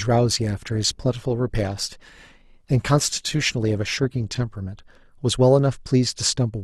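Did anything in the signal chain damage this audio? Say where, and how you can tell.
Yes. For the first 5.14 s the speech sounds dull and smeared, with thin or synthetic-sounding treble and stronger codec artefacts, then at 5.14 s it abruptly turns clearer with no gap or dropout. This is an adaptive stream starting at a low bitrate, a network and codec-stage effect. The player began on a cheap rendition, which fits roughly 24 kbit/s Opus, to start quickly, then switched to a richer one, consistent with about 64 kbit/s, once it had measured the connection.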